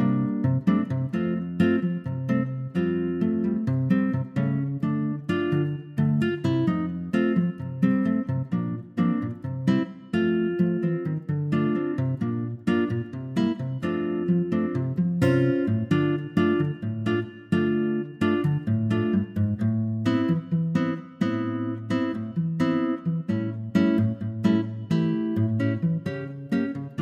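No technical faults are audible.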